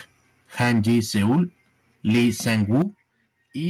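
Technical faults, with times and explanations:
0.60–1.41 s and 2.08–2.82 s, microphone overload: the loudest syllables turn harsh and crackly, with a flattened, buzzy edge on their peaks. The signal appears to be pushed about 9 dB past full scale in the first stretch and about 8 dB in the second, with around a tenth of the samples squared off. The likely cause is microphone input gain set too high, so the converter cuts off the waveform tops. Unlike codec distortion, the grit follows loudness and is worst on peaks.
0.64 s and 2.82 s, microphone volume stepped down: the whole sound, voice and background together, drops abruptly in level, by about 2 dB at 0.64 s and a much clearer 9 dB at 2.82 s, the second right where the distorted stretch ends. This sounds like software likely reacting to the overload by cutting the device's input volume in one step. A gradual gain-control ride or a fade would slope, but this is an instant step that then holds at the new level.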